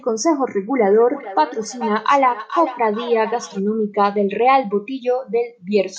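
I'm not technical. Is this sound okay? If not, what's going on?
No. Between 0.89 and 3.64 seconds there's a feedback echo between two devices: two devices in the same room share the call, and one's microphone re-captures the other's speaker. The speech returns roughly every 0.4 seconds, thinner and more ringing each time.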